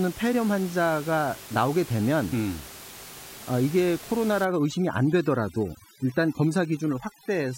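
Overdone noise removal takes hold at 4.45 s and runs to the end of the clip. Up to then, the room noise sits steadily about 17 dB below the speech. From 4.45 s, a noise reduction stage pushed far too hard starts cutting individual frequency bands whenever they come close to its noise estimate. The background drops and breaks up into twinkling specks. The softer parts of the speech are removed along with it.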